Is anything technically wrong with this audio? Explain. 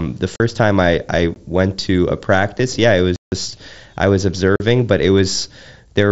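Yes. This speech has four blocks of digital silence and one concealed Bluetooth headset packet loss.

Blocks of digital silence occur at 0.36 to 0.40 s, before "time I I went", at 1.34 s, at 3.16 to 3.32 s, and at 4.56 to 4.60 s, between "I was" and "but it". The sound cuts out and back without a fade. The 17 ms and 40 ms gaps sound like short holes. The 160 ms gap is a clear hole. Output buffers going unfilled in time would explain this.

The concealed Bluetooth headset packet loss falls at 2.58 s, between "I went to a" and "yeah it". A single 7.5 ms stretch of voice data was lost between headset and phone. The receiver filled it by repeating a closely matching piece of the preceding waveform. Being a lone loss, it is nearly hidden. The mSBC headset link itself can be heard as speech limited to 8 kHz with slight graininess.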